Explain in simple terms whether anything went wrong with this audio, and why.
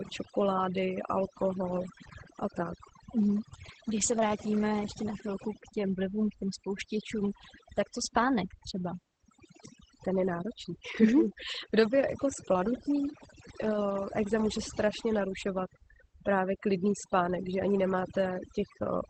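Two things went wrong, and both last the whole clip, from the first second to the end.

First, overdone noise removal. A noise-cleaning tool was set far too strong, so it kept switching off narrow slices of sound whenever they looked like background hiss, and the quieter parts of the voice were caught up with them. The gaps between phrases drop to near silence with twinkling specks.

Second, Opus voice compression. The audio was squeezed hard by the Opus codec in its speech-only mode, which keeps a rough model of the voice rather than the sound itself and throws away everything above about 8.7 kHz. The damage is plainly audible: the speech sounds muffled and dull, with a hoarse, slightly robotic edge, because the fine detail that makes a voice crisp and natural was discarded to save space.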